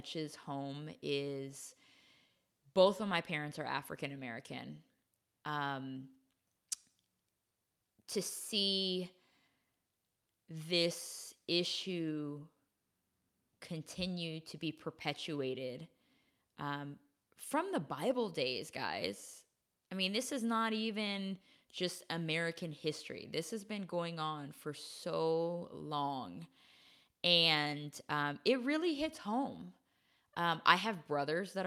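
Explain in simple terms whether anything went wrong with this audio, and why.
Nothing went wrong here.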